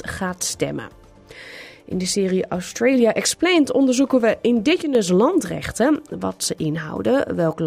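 At 4.82 s there's a sudden gain jump: level and background noise drop together by about 7 dB until 4.95 s, likely an unramped digital gain change.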